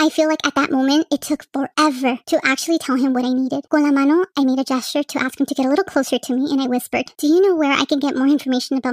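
From the first moment to the last, the speech runs fast and chipmunk-high, a classic wrong sample rate fault. It sounds like audio captured at 32 kHz and played back at 44.1 kHz without conversion, so everything is sped up about 1.38 times and pitched up roughly five and a half semitones.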